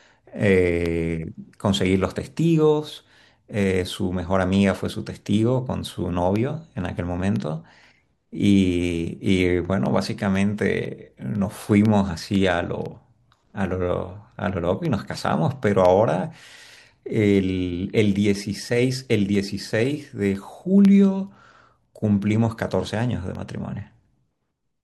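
A speech recording with periodic USB or driver dropouts. Regular ticks recur every 0.5 s from 0.36 s to 24.36 s, about fifty in all. Each is a tiny silent gap, a fraction of a millisecond. A background task is blocking the audio path at a fixed interval.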